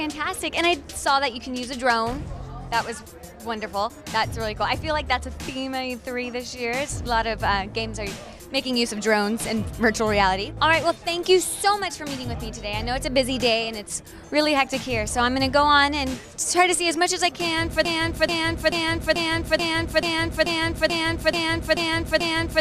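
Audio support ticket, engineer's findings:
Broken-record loop, 17.85 s to end of clip. Probable component: player, encoder or stream, likely stalled and resending its last buffered fragment. Effect: a 0.44 s fragment repeats exactly, back to back, 11 times with no variation. Audio due in that span never plays and is lost, and playback does not recover before the clip ends.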